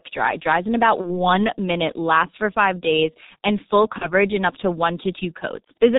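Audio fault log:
Throughout: G.723.1 codec damage, heavy, at 6.3 kbit/s. The speech sounds muffled and hoarse, with consonants smeared, because the codec discards everything above 4 kHz and rebuilds the voice from a coarse model refreshed only once per 30 ms frame. On a spectrogram the energy stops flat at 4 kHz, and the harmonics look blocky and rough. The waveform lacks the sharp onsets of fricatives and plosives.
1.01–1.16 s and 3.98–4.10 s: VoIP packet loss concealed by the speech codec. Each event follows the loss of what sounds like a single 30 ms frame. It occurs after "it dries in about" and before "minute lasts for five", then after "five days and full" and before "in up to one". The decoder guesses the missing audio from its last pitch and filter and lowers the gain, which gives a brief buzzy tone or coloured noise that fades. Because each frame builds on the one before, the distortion lingers after the lost frame, so each event spans about 110–150 ms. 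On a spectrogram this looks like flat, repeated harmonic stripes, and the waveform envelope sags before it recovers.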